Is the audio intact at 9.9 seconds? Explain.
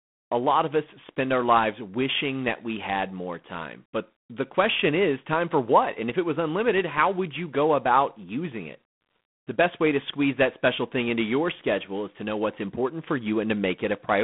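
No. At 9.9 seconds the speech carries G.726 ADPCM damage, which runs through the whole clip. The codec sends each sample as a few bits of difference from an adaptive prediction, and the coarse quantising leaves a rasping hiss that rises and falls with the speech level, which fits the 24 kbit/s mode. The sound is confined to a telephone band of about 150 Hz to 3.5 kHz, with nothing above 3.8 kHz.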